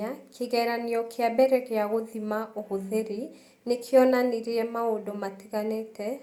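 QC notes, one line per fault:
No faults detected.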